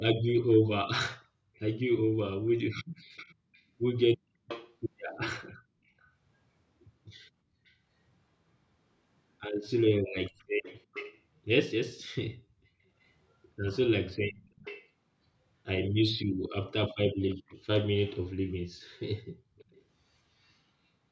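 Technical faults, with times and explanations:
1.55–6.09 s, 7.65–7.74 s, 10.38–12.08 s, 13.03–13.08 s, 14.31–14.89 s, 17.3–17.55 s, 19.57–20.53 s: echo leak. A second copy of the speech trails the original by 350 ms. In the longer stretches up to 14.89 s it sits about 15 dB below the speech, and in the last one about 30 dB below. The brief bursts are fainter, about 30 to 40 dB below. The likely cause is a loudspeaker on the other end whose echo canceller let part of the playback back into its microphone, so it returned down the call.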